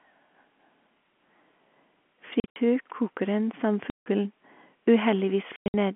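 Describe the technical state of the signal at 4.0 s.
At 4.0 s the audio falls into a hole from packet loss filled with silence, 3.9 to 4.06 s: about 160 ms of lost packets, likely 20 ms each, replaced by dead silence with hard edges rather than a smooth fade.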